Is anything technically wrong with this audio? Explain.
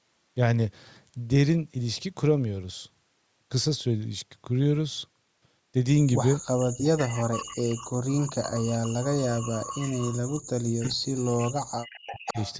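Yes, two related call problems show up in the second half.

Speech suppressed in double talk hits from 6.35 to 9.78 s and again from 10.67 to 12.38 s. The speech dips hard, by around 40 dB at worst, and breaks up in chunks. Likely the echo canceller couldn't tell the talker apart from loudspeaker echo during overlapping talk, so it ducked everything.

Echo leak comes through as a delayed copy of the speech, 426 ms behind, at 6.6, 7.01 to 7.72, 8.23 to 10.4, 10.85 to 10.94, 11.38 to 11.43 and 11.84 to 12.54 s. It ranges from a faint scrap to fairly prominent. That's likely loudspeaker pickup the canceller didn't fully remove.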